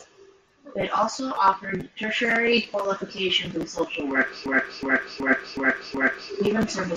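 From 4.46 to 6.32 s, after "qualifications in social work", a system hang loop repeats one 371.5 ms chunk five times. The skipping-record sound fits a 16384-sample buffer.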